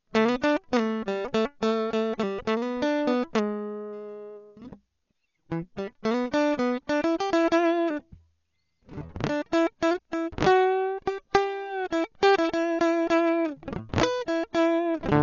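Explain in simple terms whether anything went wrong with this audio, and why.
The music sounds dull from start to finish. Nothing is heard above 7 kHz, and tones have a rough, fluttering hiss. Heavy Dolby Digital compression is the likely cause.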